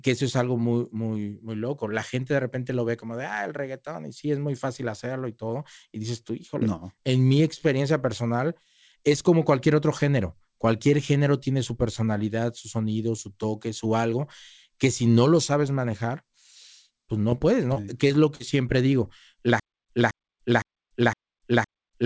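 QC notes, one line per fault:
17.30–18.42 s, repeated packet loss (robotic sound): packets dropped six times here, the longest gap 43 ms. Each hole was patched by stretching the sound before it, so about 13% of the span is filler, giving choppy speech with pieces missing just before "siempre digo la".
19.60 s to end, stutter with silent gaps: after "siempre digo la" the stream likely stalled and kept retrying. It replays the same 222 ms fragment, then goes dead for 289 ms, repeating every 511 ms with digital silence and no new speech.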